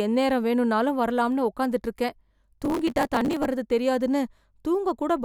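From 2.49 to 3.45 s, processor overload crackle: the processor repeatedly failed to finish its tiny buffers, each well under a millisecond, on time, and around a hundred were skipped outright. Each skip leaves a hard-edged gap, so the speech carries a gritty, tearing crackle that stops when the load clears.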